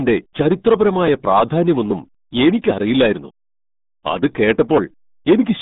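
Speech, carrying RealAudio 14.4 codec damage throughout. Nothing passes above 3.8 kHz, so it sounds muffled and gargly, which fits an 8 kbit/s dial-up codec.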